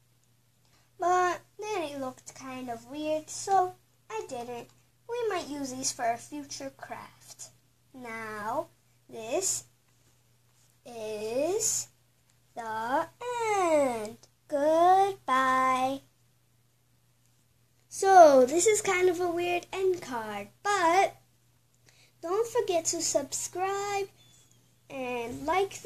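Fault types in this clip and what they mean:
Damaged data in a compressed stream: corrupted frames make the decoder lose sync, producing brief blips or chirps at 3.58 s, 11.19 s and 25.52–25.54 s.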